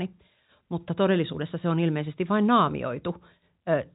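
Nothing goes wrong anywhere in this speech clip; it just has the narrow telephone sound of G.711 A-law coding, with nothing above about 3.8 kHz.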